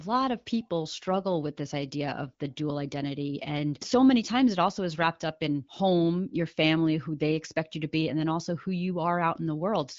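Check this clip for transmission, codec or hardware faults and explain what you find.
No transmission, codec or hardware faults can be heard in this speech clip. It has passed through an AMR wideband (HD Voice) codec at around 15.85 kbit/s, which keeps the speech clear with only light coding damage and leaves nothing above roughly 7.6 kHz.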